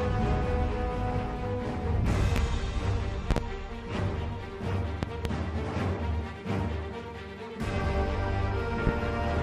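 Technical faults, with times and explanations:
2.36–2.40 s, 3.31–3.40 s, 5.03–5.29 s and 8.87–8.90 s: loud pop. A sudden voltage step or pulse, likely from a plug, switch, static discharge or driver glitch, is added to the signal. The circuits after it shape it into a brief pulse peaking about 20 dB above the surrounding audio. The first and last events are single pops, and the middle two are pairs in quick succession. Each is heard as a sharp pop or thump on top of the sound, which carries on underneath.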